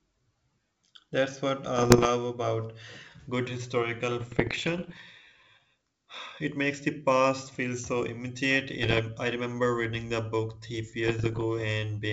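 Bit errors on an ADPCM link hit the speech at 1.77–2.07 s, 4.21–5.01 s, 8.82–9.00 s and 11.04–11.45 s. Roughly 0.7 to 1 percent of bits flip, derailing the decoder's step size and predictor, so pops and rough bursts ring on briefly: ragged waveform spikes, smeared broadband streaks.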